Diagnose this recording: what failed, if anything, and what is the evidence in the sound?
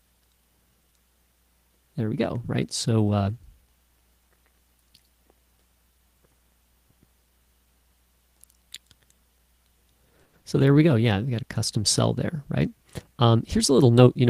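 Packets were likely held up on the network path until the jitter buffer ran dry. From 10.23 to 10.36 s the receiver kept the last sound going for about 100 ms as a fading buzz, with no drop to silence. When delivery resumed, the audio carried on from where it had stopped. This was a call audio freeze: nothing was lost, but a 100 ms hold was inserted and the playout delay grew by that much.

Moments later there was short concealed packet loss, also at the network stage. From 10.41 to 10.45 s about 40 ms of audio never reached the decoder in time. The receiver filled only a brief stretch by extending the preceding sound and then blended into the real audio. What you hear is a quick smear or wobble, and whatever occupied that slot is gone. This also took back roughly 30 ms of the delay added by the freeze.

At the receiver's buffer stage, a jitter buffer speed-up starts at 13.78 s and runs to the end of the clip. 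The buffer held more audio than its target, so the receiver repeatedly cut out pitch-period-sized pieces, removing roughly 70 ms in total. The sound plays at about 111% speed with the pitch unchanged, so the final half second sounds hurried.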